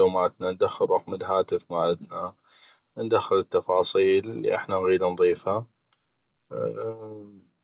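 No technical faults are audible.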